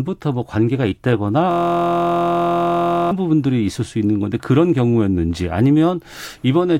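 Speech with a system hang loop from 1.51 to 3.11 s. One 23.22 ms slice repeats, fitting a 1024-sample buffer, giving a steady 43.1 Hz buzz.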